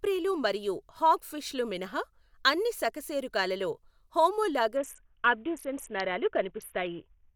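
A Bluetooth SBC bit pool drop hits this speech from 4.77 s to the end. The encoder's bit allocation collapsed to a rate pointing to about 54 kbps, leaving the treble dulled and overlaid with gritty quantisation noise.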